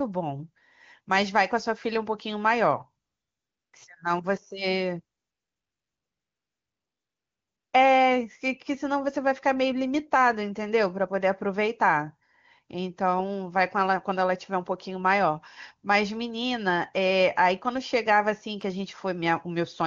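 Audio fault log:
3.05–3.73 s and 5.17–7.73 s: AMR comfort noise. Speech frames stop for 0.68 s and 2.56 s, and the receiver substitutes steady synthetic noise for the real background.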